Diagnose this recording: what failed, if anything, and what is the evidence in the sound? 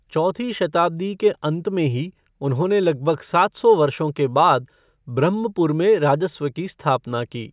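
No fault can be heard.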